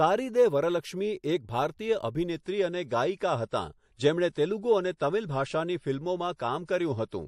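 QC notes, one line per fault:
2.36–7.28 s adaptive stream at a lower bitrate: gapless switch cuts treble above 11.4 kHz and raises codec artefacts, which fits a 128 to 48 kbit/s MP3 drop.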